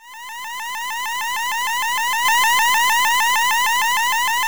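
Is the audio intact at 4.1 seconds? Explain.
No. Word clock ticks run from 0.17 to 4.26 s: an unlocked receiver clock slips a sample roughly every half second, giving sharp, uneven ticks.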